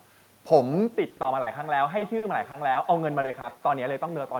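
Throughout the speech there is echo with no canceller. A quieter, thinner copy of each phrase returns roughly a fifth of a second later, about 20 dB below the direct sound, because the far end's loudspeaker output reached its microphone and nothing removed it.

From 0.94 s to the end the sound turns duller and boxier, with a level drop of roughly 10 dB and faint new background noise. There is no silence at the change. The likely cause is the input switched to a poorer device, such as another microphone or a headset call profile.

Repeated packet loss gives choppy, robotic stretches from 1.09 to 1.48 s, 1.98 to 2.77 s and 3.21 to 3.52 s. Lost packets leave holes up to 40 ms long, patched by extending the previous sound. This covers 13 to 29 percent of each stretch, and some pieces of sound are missing outright.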